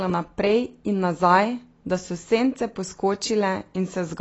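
From start to finish the speech carries plainly audible AAC compression damage, likely from AAC-LC at a rate that fits about 24 kbps. Nothing survives above 8 kHz, and sibilants turn fizzy and smeared. Unlike simple low-pass filtering, the remaining bands warble as the coder starves them.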